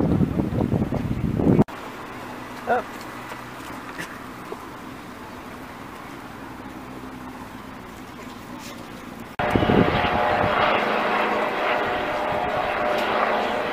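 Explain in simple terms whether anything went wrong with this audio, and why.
A tiny tick at 11.59 s: a block of digital silence, about 3 ms long, likely where the program briefly failed to supply sound, which fits a 128-sample buffer.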